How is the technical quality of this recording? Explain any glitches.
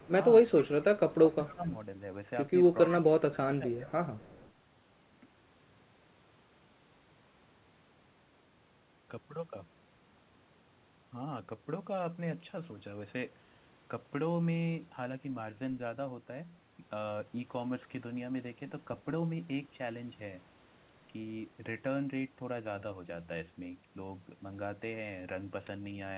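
The recording has two call-processing glitches, both packed into the first four and a half seconds, on top of a narrowband sound with nothing above 4 kHz, which fits a G.711-style phone codec.

Echo leak: a faint copy of the speech trails the original by about 0.25 s, from 0.0 to 1.55 s, again briefly at 3.33–3.37 s, and from 3.90 to 4.51 s. It's roughly 25 to 35 dB down. The likely cause is a far-end speakerphone whose echo canceller let some residue slip back.

Speech suppressed in double talk: from 0.09 to 1.66 s and from 2.91 to 3.86 s, the talker's level dips in patches by up to around 15 dB, adding up to roughly 0.7 s and 0.4 s. That's likely the echo canceller ducking everything while both sides overlapped.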